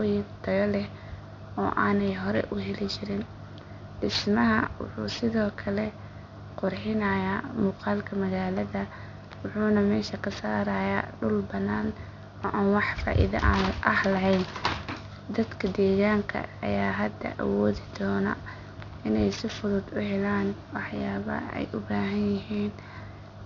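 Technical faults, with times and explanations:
Throughout, aliasing: the sibilants come out gritty and metallic, with false tones sitting around 20 dB under the speech. Energy above 6 kHz has folded back down instead of being filtered out, which fits a drop from 48 kHz to 12 kHz with no anti-alias filter.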